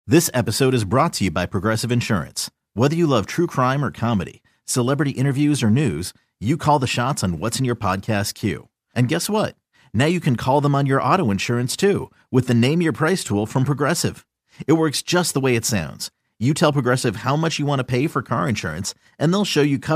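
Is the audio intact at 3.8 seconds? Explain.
Yes, the speech at 3.8 seconds is intact, with no fault to be heard at that moment.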